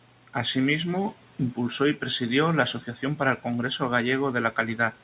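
Speech cut by the noise suppressor, 2.81 to 3.2 s, after "impulsó y presidió la": mistaken for noise, it dips about 9 dB and sounds swallowed.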